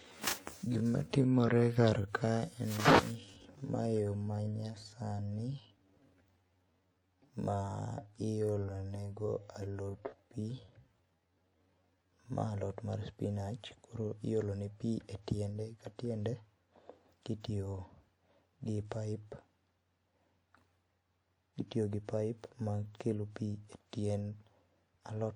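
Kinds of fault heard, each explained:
Time-stretched section: from the start to 12.4 s the speech runs at about 0.59 times its natural pace, then snaps back to normal speed where "alot mar spinach koro" begins. The pitch stays where it should throughout. That sets it apart from a simple playback slowdown or sample-rate mismatch, where the slower delivery would also drop the pitch. The likely cause is software lengthening that stretch to fill a set duration by repeating short pieces of the audio.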